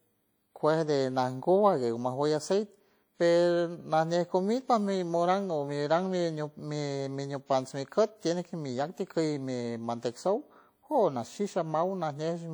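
A speech clip carrying plainly audible WMA compression damage throughout: a ringing, washy quality with hiss that swells and fades with the voice, likely from a low-bitrate encode around 48 kbps. On a spectrogram, weak components appear blotchy and gapped, with smeared energy around onsets and content extending to about 20.1 kHz.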